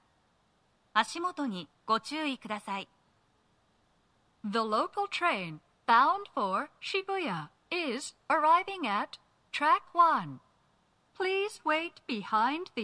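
No technical faults can be heard anywhere in this clip.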